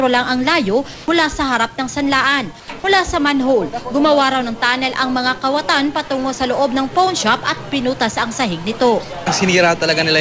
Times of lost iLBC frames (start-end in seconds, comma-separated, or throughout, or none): none